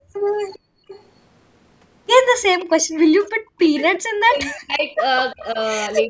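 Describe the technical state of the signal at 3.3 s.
At 3.3 s the speech carries an echo leak, which runs from 2.42 s to 3.83 s. A faint delayed copy of the speech trails the original by about 346 ms. It sits roughly 20 dB below the direct sound. The likely cause is a far-end loudspeaker being picked up by its microphone, with the echo canceller failing to remove all of it before sending it back.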